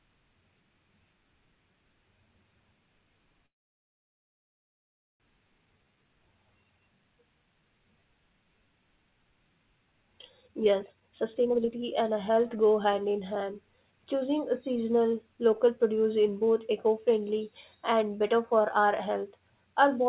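From 3.46 to 5.22 s there is a call audio freeze, likely from packets stalling in transit until the jitter buffer ran dry. The speech stops for about 1.7 s, almost all of it silence, then resumes where it left off with nothing lost, only delayed.

Right after, from 5.78 to 5.97 s, a jitter buffer slow-down rebuilds the depleted reserve by repeating pitch periods. About 48 ms is added, so the speech plays at 79% speed with unchanged pitch and sounds briefly drawn out.

Later the buffer held too much audio, and three jitter buffer speed-ups trimmed pitch-period slices to cut the delay. From 10.43 to 12.56 s the speech runs at 134%, dropping roughly 0.7 s and sounding clearly hurried. From 13.76 to 15.93 s and from 17.93 to 19.41 s it runs at 109%, shedding about 0.2 s and 0.15 s as a milder rush. Through all of this the narrowband call path leaves nothing above 4 kHz, consistent with a G.711-type codec.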